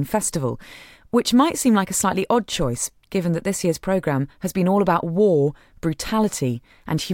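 Listening to this speech recording, nothing technically out of place stood out at any point.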